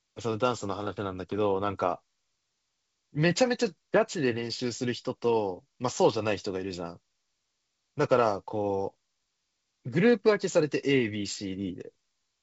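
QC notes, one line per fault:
Nothing to flag here; the speech comes through the 64 kbit/s G.722 wideband link as expected, reaching up to around 7 kHz with at most a faint hint of upper-band hiss.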